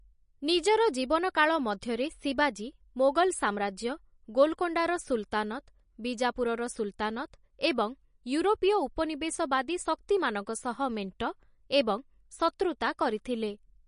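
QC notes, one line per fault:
Throughout, MP3 compression: the speech has nothing above 10.6 kHz and plainly audible watery, swirling texture, likely from a low MP3 bitrate around 40 kbps, where the encoder drops the treble and zeroes weak frequency lines that flicker between frames.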